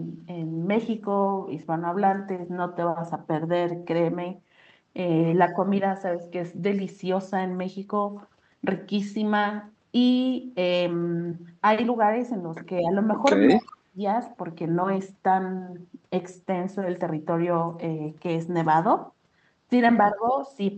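At 12.81 to 12.92 s the echo canceller likely mistook the talker for loudspeaker echo while both sides spoke at once and turned the line down. This is speech suppressed in double talk, and here it is only a slight dip of about 5 dB. The same thing happens much more deeply from 13.39 to 13.99 s, where the talker's speech drops by up to about 25 dB.

Inside that stretch, at 13.68 to 13.76 s, a brief echo leak follows. The far end's canceller likely failed to remove all of the loudspeaker sound its microphone picked up, so a faint scrap of the voice comes back about 225 ms late, roughly 25 dB below the speech.

At 20.12 to 20.39 s the pattern repeats. Speech suppressed in double talk cuts the level by about 15 dB, likely because the canceller again clamped down during overlapping talk. Within that dip, from 20.28 to 20.32 s, another short echo leak returns a delayed copy 225 ms behind, about 20 dB down.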